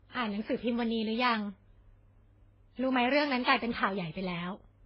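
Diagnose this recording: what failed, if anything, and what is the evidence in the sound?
Codec stage: the speech sounds like it went through transcoding between lossy codecs, likely a chain of low-bitrate encoders, leaving stacked artefacts and nothing above 5.8 kHz throughout.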